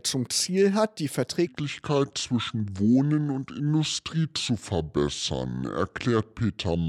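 At 1.47 s, the audio drops into a section at the wrong speed that lasts to the end. It plays at 0.733 times its proper rate. Pitch and tempo fall together, about five semitones lower, deep and dragging. The likely cause is playback or editing against a mismatched clock.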